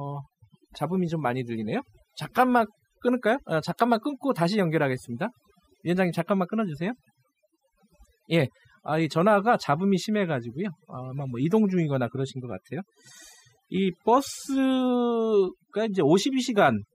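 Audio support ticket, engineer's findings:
Throughout the clip, gaps between phrases drop and break up into twinkling specks. Overdone noise removal, set far too aggressive. Bands near the noise estimate are pulled down or gated off frame by frame, taking quiet speech detail and leaving isolated residual tones.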